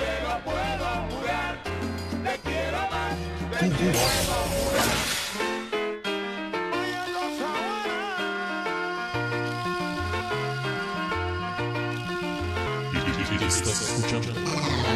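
Damaged data in a compressed stream corrupts five short stretches: the decoder misreads the bad frames, loses sync and hunts for the next frame header. Each dropout is under 20 ms and is heard as a brief chirp or blip in the sound at 1.53, 3.93, 6.71, 10.20 and 12.66 s.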